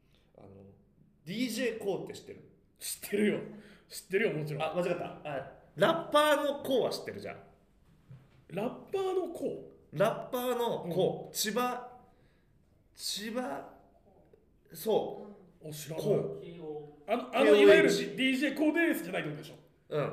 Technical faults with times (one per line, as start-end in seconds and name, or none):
0.60-19.84 clock drift buffer slips